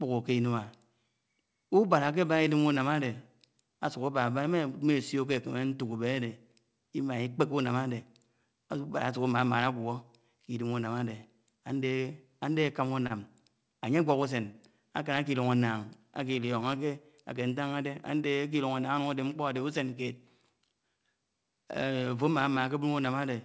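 Short stalls from a late packet occur at 13.07–13.12 s and 14.52–14.56 s. Each time, the jitter buffer ran dry, so the receiver stretched the last sound, by 32 ms and then 19 ms, before resuming where it left off. Nothing is lost, but the speech briefly hangs with a faint buzz or dip, over a call-codec band that stops near 8 kHz.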